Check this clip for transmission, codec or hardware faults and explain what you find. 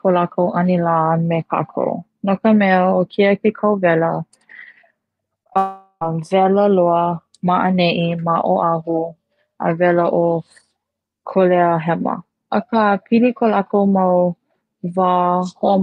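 There are transmission faults, all clustered around five and a half seconds into the speech.

Short concealed packet loss occurs at 5.43 to 5.47 s and again at 5.53 to 5.57 s. Each time, about 20 ms of audio failed to arrive. The receiver patched the gap by extending the preceding sound. Each patch is heard as a brief smear or wobble.

A long network dropout follows from 5.57 to 6.03 s. The audio stalls and a synthetic continuation of the last sound fades out over about 0.44 s. A short silence of about 30 ms follows. Speech then resumes with nearly half a second missing, most likely lost in transit.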